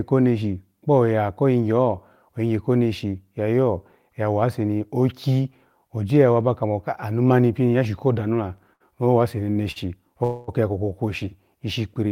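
Around 8.73 s, 9.52 s and 9.71 s the speech briefly hangs, with a sound held too long and carrying a faint buzz: about 68 ms of stretch in the first, 38 ms and 43 ms in the next two. These are short stalls from a late packet. Each time the jitter buffer ran dry, so the receiver extended the last sound until the packet arrived, then resumed at the same point with nothing lost.

From 10.24 to 10.50 s a longer hold follows: roughly a quarter second (239 ms) of continued, buzzy sound with no drop to silence before the speech carries on intact. This call audio freeze was likely caused by packets held up in transit that emptied the jitter buffer. The gap was inserted rather than cutting anything out, leaving the rest of the audio later by that amount.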